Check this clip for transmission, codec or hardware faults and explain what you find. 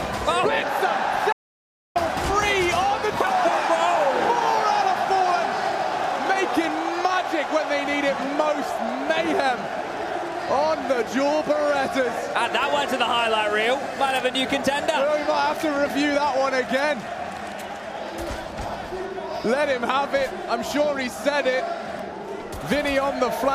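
One fault stands out: an audio dropout to silence from 1.32 to 1.96 s. The sound cuts off abruptly and is replaced by about 0.63 s of silence, with no room tone or background underneath, then resumes mid-flow just as suddenly. Whatever occurred in that stretch is simply missing. The likely cause is a brief loss of the input signal, such as a momentary disconnect, failed link or accidental mute, while the recorder kept writing silence.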